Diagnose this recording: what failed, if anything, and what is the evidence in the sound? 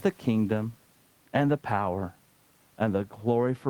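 Nothing failed in this recording, and the sound shows no evidence of any failure.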